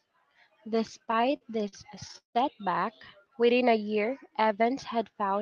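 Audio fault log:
0.99 to 2.37 s, repeated stalls (stutter): the packets kept arriving late, so the buffer ran dry 17 times. Each gap was papered over by stretching the last sound, the longest about 170 ms, totalling 395 ms. Nothing's lost, but the speech drags and hiccups.
3.30 to 4.63 s, jitter buffer slow-down: the receiver was padding out its reserve by repeating single pitch periods, adding 131 ms. The speech plays at about 91% speed with the pitch unchanged, so sounds come out drawn-out.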